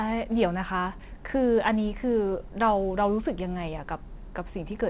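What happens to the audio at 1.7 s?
Nothing goes wrong at 1.7 s: the speech there runs on unbroken, carried by the call path's narrowband sound with nothing above 4 kHz.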